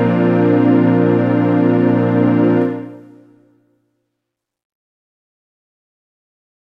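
Nothing stood out as a technical problem on listening to the recording.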